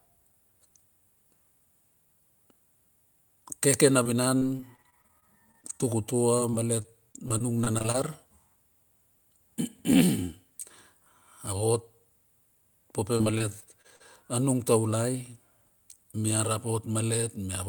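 Repeated packet loss (robotic sound) breaks up this speech recording at 4.03–5.84 s, 6.37–7.96 s and 13.18–14.02 s. Short holes, none longer than 35 ms, are patched by stretching the preceding sound, making each stretch choppy.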